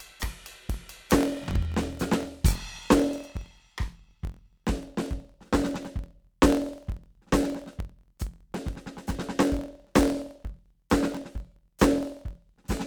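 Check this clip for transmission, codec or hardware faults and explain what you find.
The music has one fault, a block size mismatch (truncated), present from start to finish. One stage hands on longer blocks than the next stage takes in, and the surplus at the end of each block is discarded. The 43.1 Hz buzz points to a read of 1024 samples per block. The cut at every block boundary produces that steady buzz, and because material is dropped, the music plays about 1.12 times faster while its pitch stays roughly where it should be.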